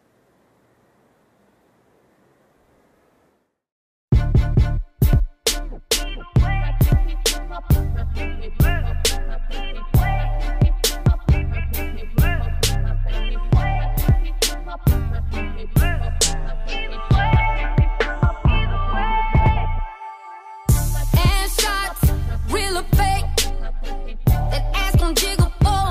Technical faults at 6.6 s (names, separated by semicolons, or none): none